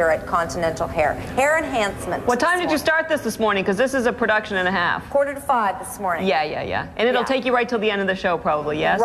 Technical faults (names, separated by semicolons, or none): none